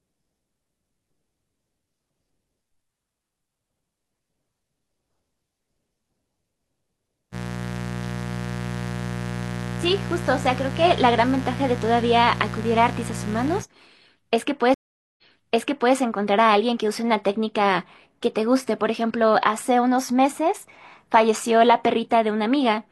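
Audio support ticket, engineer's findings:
Mains buzz, 7.31–13.64 s: raspy 60 Hz buzz with sharp harmonics reaching kilohertz, roughly 10 dB under speech. Switching spikes from a dimmer or rectifier. Harsher than smooth ground hum.

Stream reconnect, 14.74–15.95 s: 0.44 s silence, then playback resumes 0.77 s earlier, repeating material. Connection drop with a fresh decoder. A plain dropout would not rewind.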